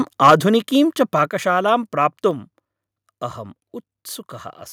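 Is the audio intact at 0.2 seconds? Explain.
No. From 0.23 to 0.34 s the loudest peaks turn harsh and crackly, with about a tenth of samples flattened. This microphone overload likely comes from input gain driving peaks about 7 dB past the converter's limit. At 0.3 s the level suddenly drops by about 3 dB, a microphone volume step down, likely the call software lowering the input after detecting clipping.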